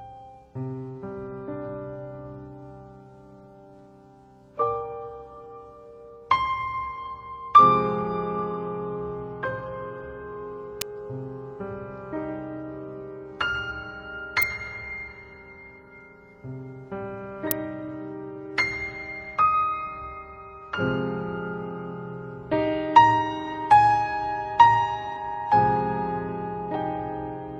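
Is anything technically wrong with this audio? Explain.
Yes. An electrical switching spike occurs at 10.81, 14.42 and 17.51 s, each a sharp snap laid over the sound, the first two peaking around -5 dBFS and the last louder still. A nearby switch or motor arcing into the audio line is the likely cause.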